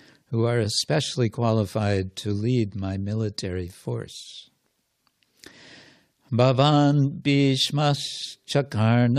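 Listening to the speech recording, nothing technical stood out at any point.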